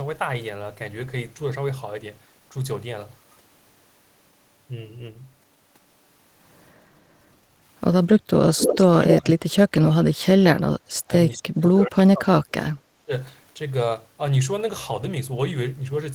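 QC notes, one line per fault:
6.95–7.24 s and 7.40–7.62 s, background gated by the echo canceller: the room sound dips by about 7 dB, then about 6 dB, while the far side plays, then recovers.
8.57–8.86 s and 9.04–9.21 s, echo leak: a copy of the speech returns 241 ms late, only around 5 dB below the talker, likely from a loudspeaker echo the canceller missed.
9.16–10.83 s and 11.07–13.11 s, speech suppressed in double talk: the talker's voice sinks deeply, by roughly 40 dB, then about 35 dB, likely because the canceller attenuated both overlapping sides.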